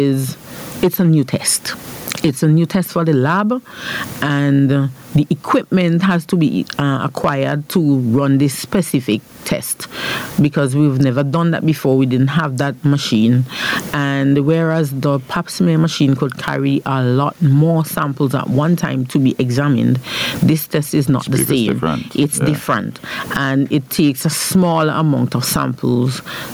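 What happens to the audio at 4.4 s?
At 4.4 s, as throughout, there's gain pumping: loud and soft parts sit closer in level and the sound is squashed, a swing of around 25 dB, likely from a fast limiter, unlike a gate's hard cutoff.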